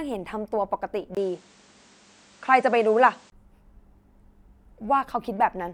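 The input likely switched to a poorer device at 1.15 s, with a 20 ms silence at the switch, and back at 3.32 s. In between, nothing reaches above 9.5 kHz, so the speech turns duller, the level shifts by around 5 dB, and faint new background noise appears.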